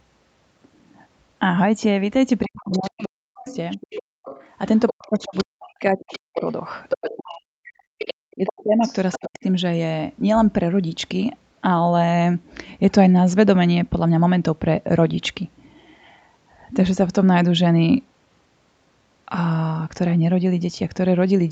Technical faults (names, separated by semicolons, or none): other side's voice leaking through; speech suppressed in double talk; background gated by the echo canceller